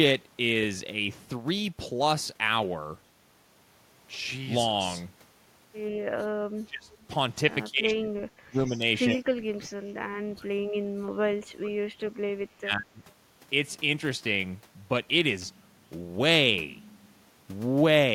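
Speech, with the talker's voice dipping by up to about 35 dB at 6.46–6.9, 7.67–8.84, 9.14–12.25 and 12.43–13.02 s, which is speech suppressed in double talk, likely from an echo canceller ducking during overlap. There's also a faint echo leak, a copy about 138 ms late and about 25–35 dB down, at 6.93–7.04, 8.66–8.79 and 9.16–9.21 s, likely residual loudspeaker echo slipping past cancellation.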